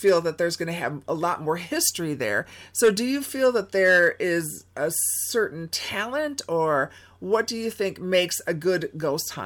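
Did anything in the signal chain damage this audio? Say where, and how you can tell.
No, nothing in the signal chain damaged this audio.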